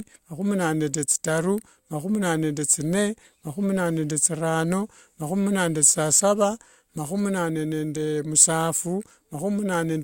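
No technical faults turn up anywhere in this speech recording, so there's nothing to walk through in time order.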